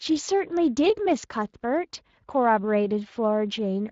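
From the first moment to the last, the speech carries Speex codec damage, and it is plainly audible. Speex is a CELP coder built for older VoIP and game chat. It rebuilds each stretch of speech from a vocal-tract filter and a coded excitation signal. Here that excitation is coded coarsely. The damage fits a setting of around 20 kbps. The result sounds noisy and hoarse.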